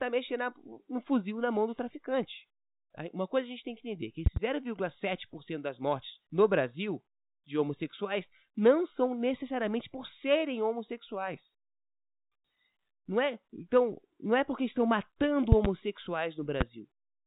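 At 4.26 s, after "tem que entender que", a double loud pop jumps about 20 dB above the speech. A louder pair, about 25 dB up, follows at 15.52 s, after "é porque estão matando". A single pop hits at 16.61 s. Each is likely a brief voltage spike.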